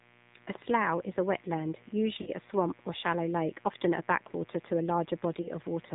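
Speech runs through the AMR narrowband mobile codec for the whole clip. Nothing passes above 4 kHz, so on a spectrogram the energy stops at a hard ceiling there, and the voice has the buzzy, plainly synthetic texture of a low-bitrate mode. The degree of that texture fits AMR-NB at around 7.4 kbps, where the few pulses allowed per 5 ms subframe can't carry the fine detail of the voice. A steady mains buzz also sits under everything, about 30 dB below the speech. It comes from sharp switching spikes locked to the 60 Hz supply. On a spectrogram this shows as a comb of horizontal lines at 60 Hz multiples climbing toward the 4 kHz limit, visible even in pauses. In the waveform it appears as a small periodic ripple in the gaps. There are lost AMR speech frames at 2.22 to 2.31 s, a 40 ms gap consistent with two consecutive 20 ms frames, and at 5.42 to 5.49 s, a 20 ms gap that fits a single frame. 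In each, the decoder repeats the last good pitch and vocal tract settings at falling gain. This is heard as a short warbling smear and dip. It shows as a brief smeared, fading patch in the spectrogram and a shrinking envelope in the waveform before the speech resumes, briefly rough.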